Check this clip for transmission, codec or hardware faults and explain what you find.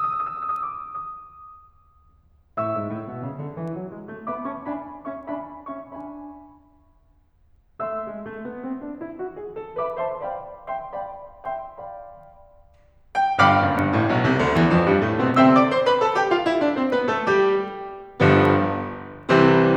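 One fault is present in this music: word clock ticks. From 0.56 s to 19.23 s, ticks recur about every 0.7 s, roughly thirty in all. The receiver runs on its own clock, drifting around 30 ppm from the sender. Each slip drops or repeats one sample.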